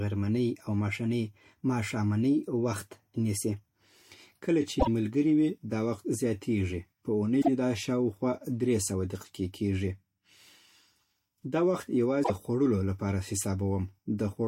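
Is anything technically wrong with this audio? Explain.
Yes. The speech has three short bursts of damaged data in a compressed stream, at 4.77–4.88 s, 7.38–7.48 s and 12.21–12.31 s, each about 0.1 s long. Corrupted bytes cause the decoder to misread those frames and lose sync until it finds a valid frame header, so a brief chirp, squawk, click or short hole replaces the speech. On a spectrogram each appears as a narrow vertical disruption. The waveform shows an abrupt discontinuity at each burst.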